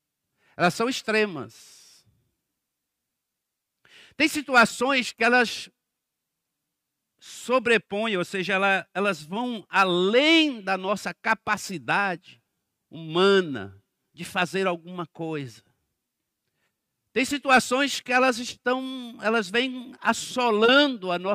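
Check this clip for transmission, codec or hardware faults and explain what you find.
Nothing in the signal points to a fault; the speech is clean throughout.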